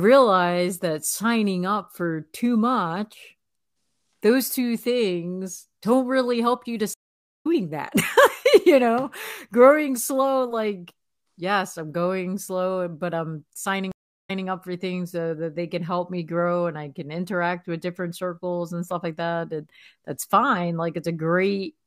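Twice the connection dropped and the player reconnected, starting a fresh decoder mid-stream, which is a stream reconnect. At 6.94 s, after "really help you to", the sound cuts to 0.5 s of silence and resumes at 7.47 s roughly half a second further on, so material is skipped. At 13.92 s, after "slow but I'm signing", a 0.36 s gap follows, then the audio comes back 0.18 s earlier, repeating a fragment before "up for things so" at 14.46 s.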